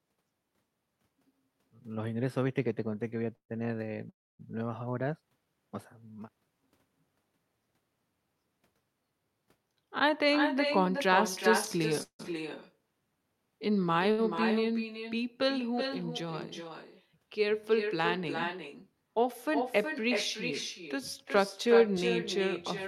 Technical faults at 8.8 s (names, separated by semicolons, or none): echo with no canceller